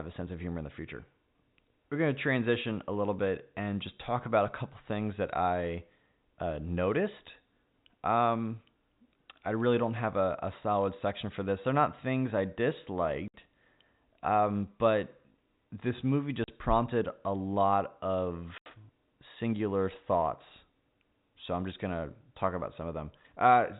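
Packets went missing in transit and the receiver filled each gap with silence, a fault known as packet loss filled with silence. The speech drops out at 13.28 to 13.34 s (60 ms), 16.44 to 16.48 s (40 ms) and 18.58 to 18.66 s (80 ms). Each gap is a multiple of 20 ms, which points to 20 ms packets. The sound cuts off abruptly and returns with hard edges, on a band-limited G.711 telephone line.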